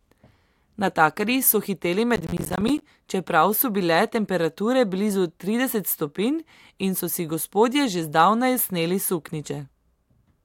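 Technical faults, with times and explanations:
2.16–2.82 s processor overload crackle: the processor keeps missing deadlines for what sound like 10 ms buffers, so hard-edged silent gaps crackle through the speech after "so hiteli".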